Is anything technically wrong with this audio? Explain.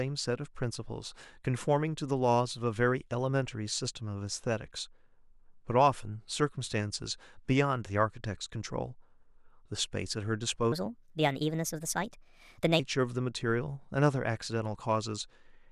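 Yes. There is a section at the wrong speed, from 10.72 s to 12.79 s. For about two seconds the speech runs 1.33 times faster than it should. Pitch rises with it, by about five semitones. The voice turns high and hurried, then drops back to normal at 12.79 s. Speed and pitch shift together, abruptly, at both edges. The likely cause is that this stretch was played or resampled against the wrong clock.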